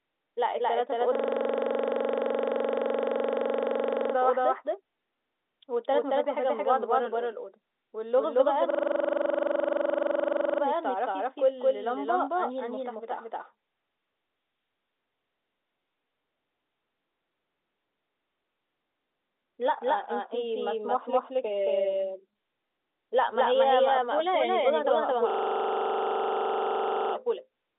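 From start to finish the speech carries a doubled audio track: a second full-band copy trails the original by roughly a fifth of a second at about the same level. It has no decay or room colour, so it reads as a hard slapback rather than an echo. The likely cause is the signal being captured twice, once through a slower path, or two out-of-step copies being left in an edit. The narrow telephone band, with nothing above about 3.8 kHz, comes through cleanly underneath.

A system hang loop appears three times: from 1.15 to 4.14 s, from 8.70 to 10.62 s, and from 25.30 to 27.14 s. Each time a single 42.67 ms slice of audio repeats exactly, dozens of times, which gives a rough, buzzing stutter at 23.4 Hz. The repeating length fits a 2048-sample ring buffer being replayed by the sound hardware while the machine or its driver stalled. When each loop ends, the speech resumes with little or nothing apparently missing.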